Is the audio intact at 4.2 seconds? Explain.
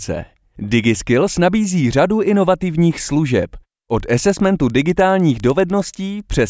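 No. From 3.9 s to the end at 6.5 s, right after "nabízí řadu inovativních služeb", a resampler restarted on every block puts a small error at each block edge. This gives regular ticks at 10 Hz, which fits 100 ms blocks. Unlike dropouts, nothing goes missing, and the ticks come only with signal.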